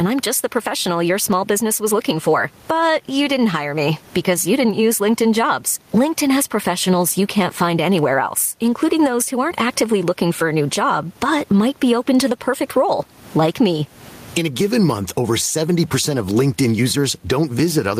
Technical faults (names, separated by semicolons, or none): gain pumping